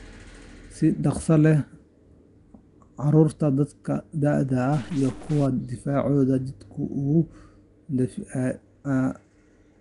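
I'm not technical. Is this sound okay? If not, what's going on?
No. All the way through, the speech has a rough, hissy haze and a smeared, underwater quality, and nothing is heard above about 10.6 kHz. That points to Nellymoser compression, the likely cause. Unlike ordinary muffling, weak frequency bands fill with fizzy noise.

From 4.73 to 5.46 s, a distortion cuts in, and the pauses there turn noisy instead of silent. This fits a stuck bit as the likely cause, with one digital bit frozen. Unlike clipping, it affects quiet moments too, not just loud peaks.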